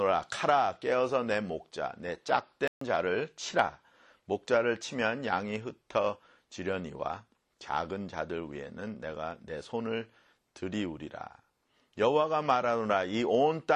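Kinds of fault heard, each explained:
Playback stall: At 2.68 s the sound cuts out mid-flow and stays silent for about 138 ms, until 2.81 s. It then carries on. The likely cause is the player running short of data, or its thread being blocked, so nothing reached the output.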